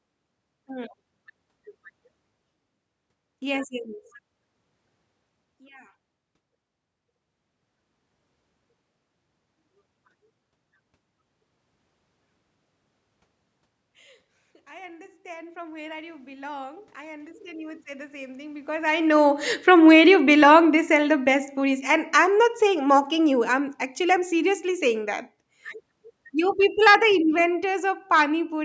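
A speech recording made through a call's microphone processing, band-limited to 8 kHz, with two level faults from the automatic gain control. From 14.67 to 19.52 s the automatic gain rises: the controller judged the input too quiet and raised its gain by about 11 dB over nearly five seconds. The voice and the room noise behind it swell together, which separates this from the talker moving closer; a real change of distance around 18.5 s leaves the background steady. Immediately afterwards, from 19.57 to 25.0 s, the automatic gain falls. The controller now treats the input as too loud, or its background noise as too strong, and pulls the gain down by about 9 dB. Speech starts out loud and then sinks gradually, with the background noise dropping in step.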